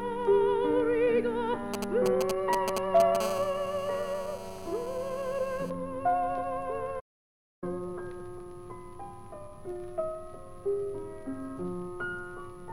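GSM signalling bursts appear from 1.74 to 3.17 s. A nearby 2G phone is signalling, and the audio circuit rectifies its radio pulses. The result is a galloping pattern of short buzzes at a 217 Hz burst rate, roughly as loud as the audio itself. At 3.20 s it turns into a steady GSM phone buzz lasting until 5.70 s. Here the phone is in a call and transmits in bursts 217 times a second. The buzz is hard and raspy, full of harmonics, and sits about 16 dB below the audio. A playback stall follows at 6.99 s. The sound stops mid-flow for 0.62 s and resumes at 7.64 s. The player most likely ran out of data or had its thread blocked.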